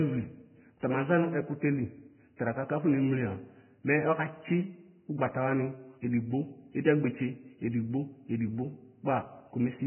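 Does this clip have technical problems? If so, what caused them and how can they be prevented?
Yes. Throughout the speech there is nothing above 3 kHz, and the remaining treble is hissy and grainy with smeared consonant attacks. This is likely Vorbis compression at a very low bitrate, around 10 kbps, where coarse residue quantisation turns detail into noise. Encoding at a higher Vorbis quality setting prevents it.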